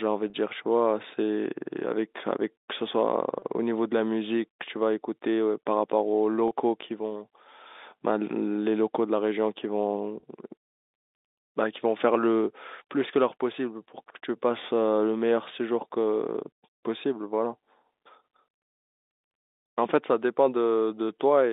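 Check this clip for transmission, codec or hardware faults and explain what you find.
There's one fault here, packet loss with pitch repetition, turning up four times in this speech: at 0.30, 3.39, 6.48 and 10.20 s. Each gap is about 30 ms, which fits a single lost packet each time. Rather than leave a hole, the receiver bridged it by repeating the last pitch period of the voice, so each spot comes across as a brief held, slightly buzzy tone before normal speech picks up again. The audio runs over telephone-band G.711 coding throughout, so the band stops around 3.7 kHz.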